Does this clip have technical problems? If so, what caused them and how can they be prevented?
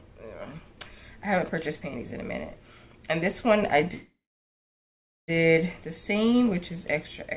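Yes. From 3.94 to 5.30 s the sound breaks into a brief fading buzz, then about 1.1 s of silence, and resumes with nothing lost. This is a call audio freeze, likely from delayed packets draining the jitter buffer. A more stable network path or a deeper adaptive jitter buffer would prevent it. The 4 kHz band limit fits G.711 at 64 kbps.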